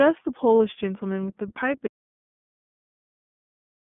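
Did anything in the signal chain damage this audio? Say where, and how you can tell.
Yes. The whole clip is thin, boxed-in and slightly rough and synthetic, with nothing below about 200 Hz or above about 3.5 kHz. This is damage at the codec stage: the iLBC codec, a narrowband VoIP coder, rebuilds each 30 ms frame from a compact excitation model and throws away everything outside the telephone band. The coarse, buzzy texture fits its 13.33 kbps mode, and the damage is plainly audible throughout.

At 0.58 to 0.60 s there is a brief held, faintly buzzy smear where the speech should keep moving, and it recovers cleanly straight after. This is lost iLBC frames at the network stage, consistent with a single 30 ms packet going missing. The decoder covered the hole by repeating the last pitch cycle blended with noise. Because each iLBC frame decodes independently, the next frame arrives intact and the voice snaps back at once.

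From 1.87 s to the end the sound cuts out mid-flow into silence, with no room tone or noise floor. This is an audio dropout to silence. The input was likely lost upstream of the encoder, through a disconnected device, a broken link or an unintended mute, while the recorder kept writing silence. Whatever was spoken after that point is gone.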